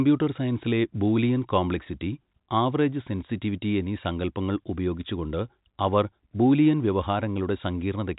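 Nothing here sounds technically wrong: it's speech carried over ordinary G.711 telephone coding, so the sound stops at around 3.8 kHz, just as that phone-line format should.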